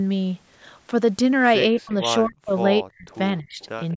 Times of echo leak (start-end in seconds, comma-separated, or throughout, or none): 3.11-3.16, 3.60-3.66, 3.91-3.95